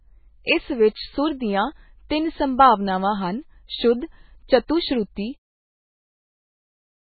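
Throughout the speech, nothing is present above 4.5 kHz, and the remaining band sounds watery and swirling as weak components flicker on and off. This is likely heavy MP3 compression at a very low bitrate, around 16 kbps. A plain low-pass filter would dull the sound without that flickering.

Pre-echo appears at 4.67 s and again at 5.50 s, the second during a smooth fade-out ending around 5.5 s. A short hiss of 15 to 18 ms runs just before each attack because the codec's noise spreads backward across its block. Unlike a click, it is soft and blurs the onset.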